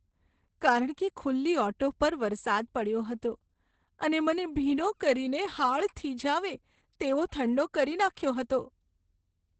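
Opus voice compression runs throughout: SILK wideband coding leaves the speech muffled and hoarse, consistent with roughly 10 kbps, and a spectrogram shows nothing above 8.8 kHz.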